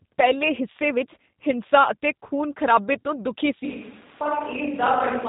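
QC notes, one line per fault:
Throughout: G.729 codec at 8 kbit/s. Speech is resynthesised from a vocal-tract filter and sparse pulses, so it sounds plainly rough and synthetic, with nothing above 3.8 kHz.
3.64 s to end: switch to a distant microphone, likely. The voice abruptly turns roomy and hollow with less bass, at a similar level, with room noise about 25 dB below it.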